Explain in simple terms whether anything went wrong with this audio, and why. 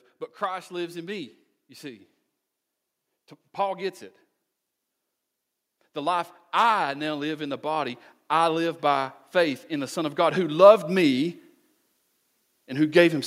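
Automatic gain rising occurs between 5.79 and 11.34 s: the recorder judged the speech too quiet and slowly turned itself up, so speech and background swell together.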